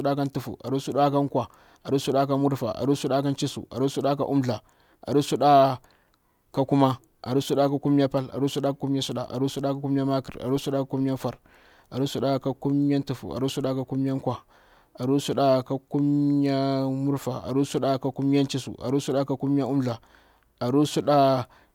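No technical faults are audible.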